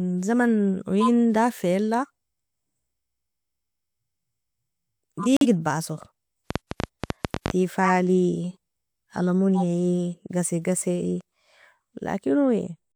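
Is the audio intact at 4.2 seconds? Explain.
Yes, at 4.2 seconds the audio is intact, with no fault present at that moment.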